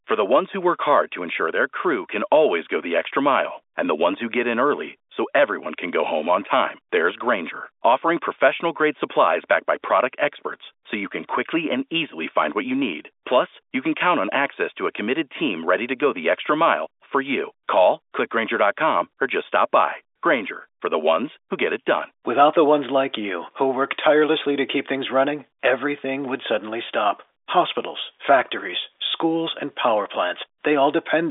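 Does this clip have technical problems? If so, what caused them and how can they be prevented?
No, this clip has no technical problems, so there is nothing to prevent.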